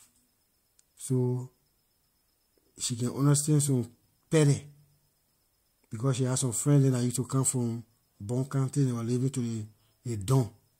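A careful listen to this speech recording turns up nothing that stands out as a technical problem.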